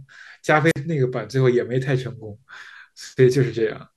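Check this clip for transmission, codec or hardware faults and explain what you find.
A wireless microphone squelch dropout interrupts the speech between 0.66 and 0.77 s. The analogue FM radio link from the microphone weakens so far that the receiver can no longer hold a clean signal, and its squelch circuit shuts the output rather than pass raw noise. A short surge of hiss and static comes first, then the audio drops to near silence for about 47 ms, and then the speech comes back once the signal recovers.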